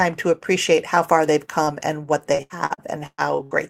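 At 1.63 to 1.70 s, just after "appreciate how far they've" and before "and what", a short concealed packet loss occurs: about 40 ms of audio failed to arrive in time, and the decoder bridged the hole by extending the preceding sound, leaving a brief smeared wobble before the real signal resumes.

From 2.35 to 3.54 s, following "and what", repeated packet loss sets in: six separate gaps, the longest 117 ms, are each patched by continuing the last sound, so roughly a third of this stretch is synthetic fill, giving a choppy, robotic quality with fragments missing.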